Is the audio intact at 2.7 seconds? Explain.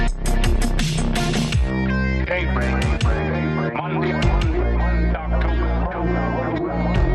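No. At 2.7 s, as across the whole clip, the sound is dull, with a gurgling, granular distortion, likely MP2 compression at a low bitrate, consistent with roughly 80 kbps. Too few bits switch upper sub-bands off, so the top flickers and the remaining bands are coarsely quantised.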